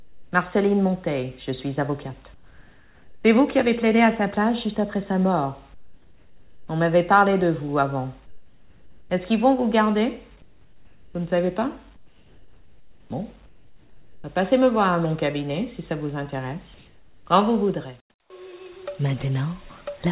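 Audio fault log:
0.0–0.32 s, 2.34–3.24 s, 5.74–6.68 s, 8.26–9.1 s, 10.42–14.24 s and 16.74–18.3 s, comfort noise in place of the background: in each gap the real background, which sits roughly 30 to 33 dB below the loudest sound, gives way to a flat, featureless hiss, about 3 to 7 dB quieter where it's measurable. That's likely discontinuous transmission: the sender goes quiet when its detector hears nothing, and the receiver fills in synthetic noise, all within the 4 kHz ceiling of what sounds like a G.711-style narrowband call.
18.26–18.3 s, onset clipped by the voice detector: right as the last comfort-noise stretch ends, the sound comes back in hard, with its first 40 ms missing, so there's no soft lead-in, just an abrupt start out of the hiss. The sender's voice detector was most likely slow to notice activity again, so those opening moments were never sent and the receiver kept playing comfort noise over them.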